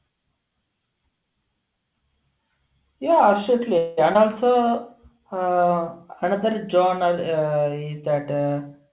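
From 3.78 to 3.99 s the sound stretches into a fading buzz for about 0.19 s before resuming intact. This is a call audio freeze, likely from delayed packets draining the jitter buffer.

At 4.13 to 4.17 s a brief smear replaces part of the audio. This is short concealed packet loss: roughly 60 ms never arrived, and a short patch of extrapolated sound covers the join.

From 4.51 to 5.20 s, just before "uh another", the audio drags at unchanged pitch. This is a jitter buffer slow-down: repeated pitch periods add 50 ms, running playback at 94% speed.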